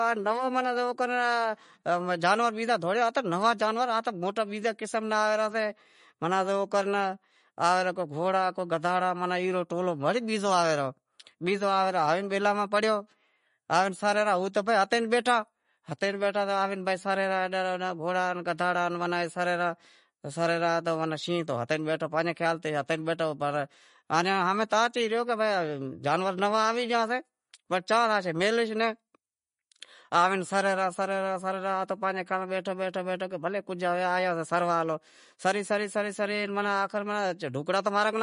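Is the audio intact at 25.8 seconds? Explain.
No. At 25.8 s the speech carries the plainly audible damage heard throughout the clip, likely from MP3 compression. Nothing remains above 10.6 kHz. Weak frequency lines switch on and off between frames, sounding watery and swirly. This fits a bitrate near 40 kbps.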